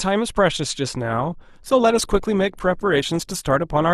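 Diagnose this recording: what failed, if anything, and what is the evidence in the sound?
At 0.97 s the speech abruptly takes on a smeared quality with more codec artefacts that lasts to the end of the clip, with no gap or dropout at the switch. That points to the network stage: an adaptive stream at a lower bitrate. The player swapped mid-stream to a cheaper encoding, and the rise in artefact level fits an Opus stream dropping from 64 to 24 kbit/s after the connection slowed.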